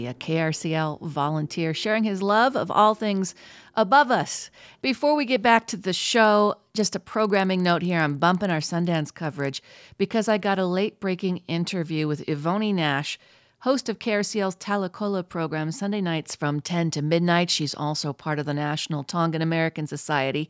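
Speech, with a resampler restarted on every block from 5.7 to 10.65 s: each 50 ms block is converted in isolation, leaving edge errors heard as 20 Hz ticking under the speech.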